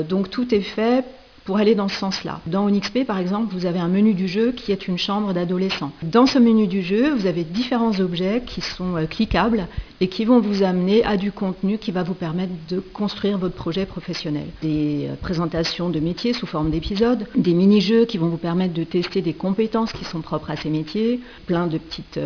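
Aliasing runs throughout. The sample rate was lowered, which fits a drop from 48 kHz to 11 kHz, without filtering first. Content above 5.5 kHz folds back as unrelated tones roughly 15 dB down, sounding gritty and metallic. A spectrogram shows energy running hard up to the 5.5 kHz edge.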